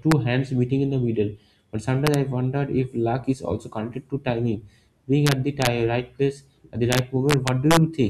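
Integer overflow: the level sat about 1 to 2 dB past the largest integer and wrapped to the opposite sign instead of being limited, so peaks flip across the full range as harsh cracks. They fall at 0.12 s before "hands meeting in the", 2.07–2.14 s, 5.27–5.67 s after "connected to timing being", and 6.92–7.77 s after "right place at the".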